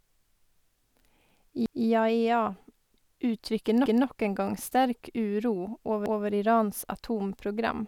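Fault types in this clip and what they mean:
Overlapping chunks: The speech was handled in 2-second blocks, and each new block began 200 ms before the previous one ended. A 200 ms slice plays twice at each join. This gives a regular stutter at 1.66, 3.86 and 6.06 s.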